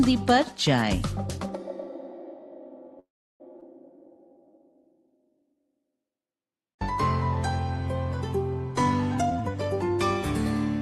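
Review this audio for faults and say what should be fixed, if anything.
At 2.99 s the audio stalls in a call audio freeze. For about 0.4 s the gap is filled: the last sound is stretched into a short fading buzz, then roughly 0.34 s of silence. Playback resumes where it stopped at 3.42 s. Packets were likely held up in transit until the jitter buffer ran dry.

At 3.60 s there is a skip ahead. About a fifth of a second of audio is simply gone. The two sides are butted together with almost no gap. A stretch of audio was dropped, in transit or by the buffer overflowing, while later audio was already waiting.

From 3.92 s to 5.93 s a jitter buffer slow-down is audible. Pitch holds steady, but the audio plays at 90% speed. Sounds are drawn out as single pitch periods repeat. About 208 ms is added to rebuild the buffer's reserve.

From 9.15 s to 9.97 s a jitter buffer speed-up follows. The audio runs at 139% speed and sounds hurried, still at the same pitch. 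Roughly 0.3 s of short pitch-period pieces are cut to bring the delay back down.

To prevent these, fix the network path delivering packets in bursts, and give the jitter buffer a steadier target delay so it stops swinging between stretching and trimming.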